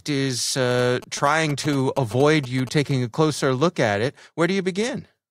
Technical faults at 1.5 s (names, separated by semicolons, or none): GSM signalling bursts